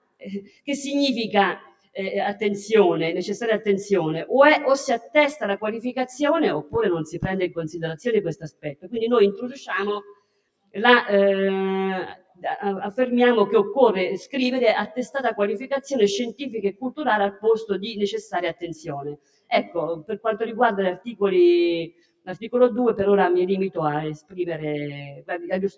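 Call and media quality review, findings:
Channel delay (comb filtering), whole clip. Rough, slightly doubled tone. One channel lags by roughly 20 ms before the mono sum, cutting fixed notches from around 30 Hz upward.

Noise suppressor applied to music or sounds, throughout. Pumping and thinning as held material is turned down by roughly 10 dB. A speech-tuned suppressor is treating steady content as noise.

Sound cut by the noise suppressor at 0.00–1.96 s, 5.00–12.44 s, 16.73–22.47 s and 24.17 s to the end. Drops reach about 21 dB. Sustained and decaying parts sink while onsets pass. Call mic path band-limited to 8 kHz, as expected.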